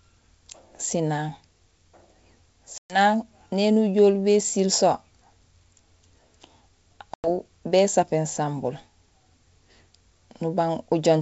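Speech over G.722 wideband coding, with packet loss on an ADPCM call: silent holes of 120 ms at 2.78 s and 100 ms at 7.14 s, before "néni ujool bésiil so" and "bésapéén sambul". Unlike a plain dropout, after each hole the speech returns slightly distorted as the decoder's predictor and step size resynchronise.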